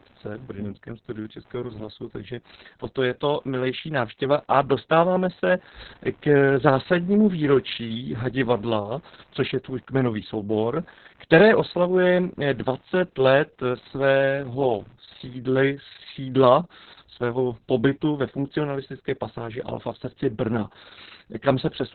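From start to finish the speech carries heavy Opus voice compression, with nothing above 4.5 kHz. This points to the SILK coder running narrowband at a very low bitrate, around 6 kbps. The excitation is coded coarsely, leaving the voice muffled, hoarse and slightly robotic.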